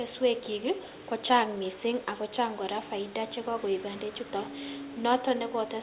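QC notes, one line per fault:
0.84–0.91 s, echo leak: a faint copy of the speech trailing by 137 ms, roughly 25 dB down, likely loudspeaker pickup the echo canceller failed to remove.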